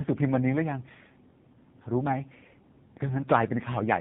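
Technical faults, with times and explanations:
Throughout: tandem speech coding. The speech passed through two low-rate speech coders in a row, with a plain telephone-band link between them. The second coder had to re-encode audio the first had already degraded, so the errors stack. The sound is rougher, more muffled and more warbly than a single coding pass would leave it. Nothing survives above 3.7 kHz. The final stage sounds like narrowband AMR at a low rate, around 8 kbit/s.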